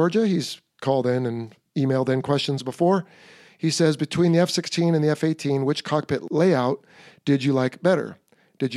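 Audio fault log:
No faults heard anywhere in the speech.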